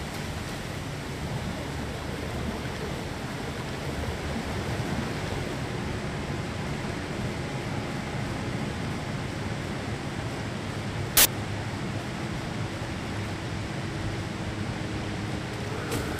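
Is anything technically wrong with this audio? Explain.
Yes. From 11.17 to 11.25 s, samples are built from the wrong bytes. Misassembled bytes turn fast-changing low bits into large values, producing a burst of loud, harsh broadband noise.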